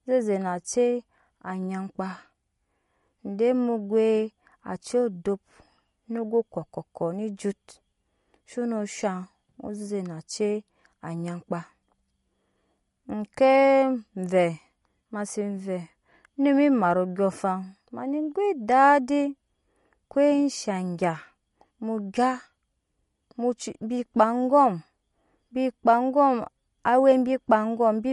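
From start to finish, the speech carries a watery, swirling quality, with metallic chirps on s sounds and softened consonant attacks, most likely from MP3 compression at a low bitrate, which fits something near 48 kbps. Starved of bits, the encoder cuts everything above 11.2 kHz and drops weak frequency lines that flicker in and out between frames. On a spectrogram this shows as a hard ceiling at 11.2 kHz and speckled, patchy upper bands.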